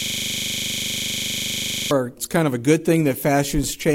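The audio opens mid-fault with a system hang loop, already under way at 0.0 s and lasting until 1.91 s. A single 40 ms fragment repeats exactly, dozens of times in a row, producing a rough, buzzing stutter at 25 Hz instead of continuous sound. The host or driver stopped supplying new data while the audio hardware kept replaying the same short ring buffer. The loop length points to a buffer of about 40 ms.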